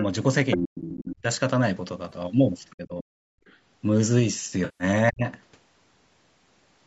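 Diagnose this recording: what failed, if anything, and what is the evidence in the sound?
Call processing: other side's voice leaking through at 0.51, 0.83, 2.7 and 3.47 s, brief second-voice bursts fading from loud to barely audible, likely incomplete echo cancellation; spectrogram shows overlapping harmonic stacks.

Call processing: speech suppressed in double talk at 0.56–1.26, 2.76–3.38 and 5.1–5.25 s; the waveform envelope collapses by about 40 dB while both sides overlap, likely the canceller ducking.

Network and codec: AAC frame loss with concealment, scattered smeared patches across 2.09–2.17 s, then a 150 ms decay-and-return at 4.65–4.84 s, fitting lost 10 ms frames; spectrogram shows blurred bands.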